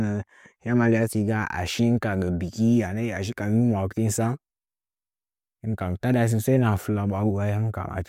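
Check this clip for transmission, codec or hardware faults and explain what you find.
Nothing in this speech recording stands out as a fault, so there's happily nothing to report here.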